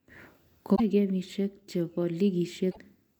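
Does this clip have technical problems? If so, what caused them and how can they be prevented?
Yes. Two short bursts of damaged data in a compressed stream occur, from 0.72 to 0.80 s and from 2.68 to 2.78 s, each cutting into the speech. Corrupted bytes made the decoder misread those frames, lose sync and search for the next valid frame header. A plain dropout leaves silence, but here the fault comes from the decoder misreading bad data. Checksummed transfers and verified storage of the file prevent it.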